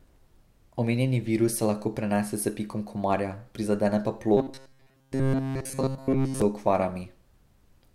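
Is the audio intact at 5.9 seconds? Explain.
No. From 4.37 to 6.42 s, just after "pikom komarja prizadene pa", new audio likely arrives too seldom, so a roughly 7.5 ms buffer is replayed over and over. This produces robotic sound from repeated short buffers: a rigid, metallic 134 Hz buzz throughout.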